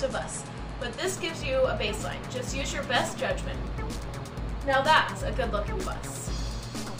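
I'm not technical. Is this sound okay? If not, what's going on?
No. From about 1.0 s to the end, there is imaging from linear upsampling: the audio was converted to a higher rate by joining its points with straight lines, leaving the top end dulled with a faint metallic shimmer above it.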